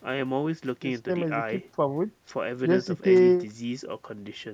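At 3.14 to 3.21 s, loose connector crackle: a worn contact briefly breaks the line, chopping the speech into a scratchy burst, seen as ragged broadband spikes.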